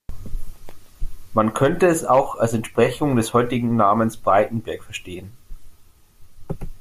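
No technical faults are audible anywhere in the speech recording.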